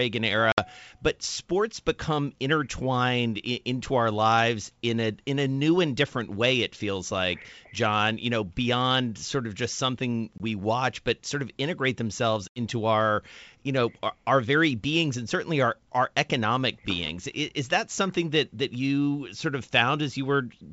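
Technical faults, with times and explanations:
0.52–0.59 s, 10.38–10.41 s and 12.48–12.60 s, packet loss on an ADPCM call: three hard-edged gaps where the speech cuts to silence. The first is about 60 ms (a few packets), just before "but sports become intertwined". The second is 20 ms, roughly one packet, between "sort of just something" and "watch but sort of". The longest is 80 ms, around four packets, between "sort of integrate themselves" and "our you know our". The G.722 stream at 64 kbit/s is ADPCM-based, so each time audio resumes, the receiver's adaptive predictor and step size are out of step with the sender's. That mismatch gives a brief wrong level, click or roughness for a few tens of milliseconds before the decoder catches up.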